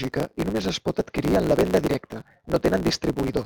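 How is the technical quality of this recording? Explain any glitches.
The recording has a block size mismatch (truncated) running through the whole speech clip. One stage writes longer blocks than the next reads, so the tail of every block is discarded. The regular cuts produce a steady buzz at about 109 Hz, which fits a written block of 512 samples. The speech runs about 1.16 times fast yet keeps roughly normal pitch, which sets it apart from a sample-rate error, where speed and pitch rise together.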